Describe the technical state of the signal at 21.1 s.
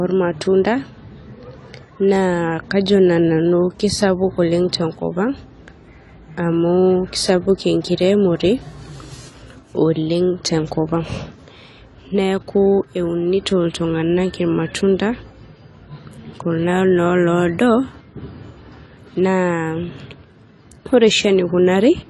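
At 21.1 s, as throughout, the speech is band-limited with nothing above 11.5 kHz and audibly smeared, warbling sibilants, likely AAC compression at a low bitrate, around 32 kbps.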